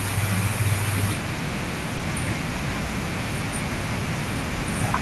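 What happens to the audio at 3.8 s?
Nothing goes wrong at 3.8 s: the speech there comes through intact, carrying only the ordinary character of the Opus call path it travelled through.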